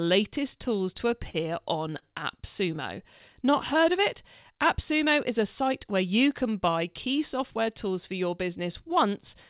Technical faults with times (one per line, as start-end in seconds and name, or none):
0.98-3.22 scattered short gaps
2.95-4.58 jitter buffer slow-down
6.68-7.94 jitter buffer speed-up